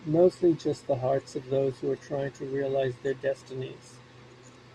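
No technical faults can be heard anywhere in the speech, and the signal holds steady throughout without any dropouts, distortion or interruptions.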